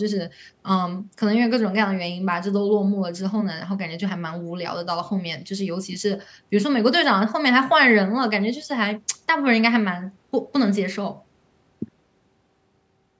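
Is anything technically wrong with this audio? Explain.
No, it is speech through normal call microphone processing, with the high-pass trimming the lowest bass and nothing above 8 kHz, both expected for that path.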